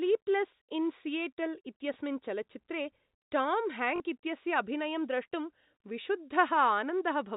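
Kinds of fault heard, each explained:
Packet loss with last packet repeated: a small blip at 1.94 to 1.96 s and, longer, a brief robotic stutter at 3.96 to 4.00 s. The receiver replayed the previous chunk, filling gaps that fit one and two 20 ms packets.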